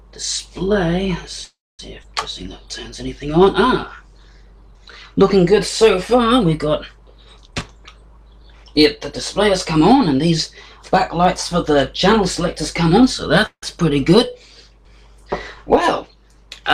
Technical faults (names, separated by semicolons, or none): call audio freeze; skip ahead; jitter buffer slow-down; jitter buffer speed-up